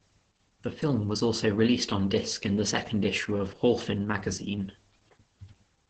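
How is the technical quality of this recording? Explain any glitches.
The technical quality is poor, with heavy damage from Opus voice compression throughout the speech. From start to finish the speech sounds muffled, hoarse and slightly robotic, with nothing above 8.8 kHz, which fits the SILK voice mode at a bitrate around 10 kbps. The linear-prediction coder keeps the vocal-tract shape but codes the excitation coarsely, producing that buzzy roughness. Unlike a simple low-pass filter, it also degrades the voice's texture, not just its top end.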